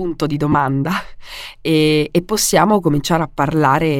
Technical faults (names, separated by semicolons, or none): lost LE Audio frames